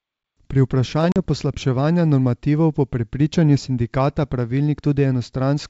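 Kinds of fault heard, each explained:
Packet loss on an ADPCM call: around 1.12 s a couple of packets of this G.722-coded speech never reached the decoder, and about 40 ms was filled with silence, leaving a hole with abrupt edges. ADPCM decoding relies on a running predictor and step size, so the decoder resumed out of step with the sender. The speech comes back with slight distortion, settling within tens of milliseconds.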